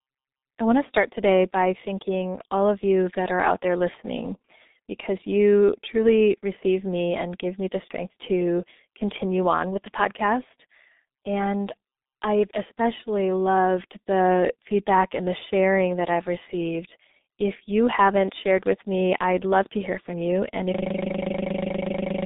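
Throughout the recording, the speech has passed through the G.723.1 codec. Its coarse, low-rate coding, which fits roughly 6.3 kbit/s, keeps only a narrow telephone band of about 250 Hz to 3.7 kHz and removes everything above 3.8 kHz. The heavy coding damage leaves the voice muffled and hoarse, with smeared consonants.

At 20.75 s a system hang loop begins and runs to the end. The machine froze while the audio hardware kept replaying one 40 ms slice of its buffer, dozens of times over. That repetition at 25 Hz turns the sound into a rapid, rattling buzz-stutter.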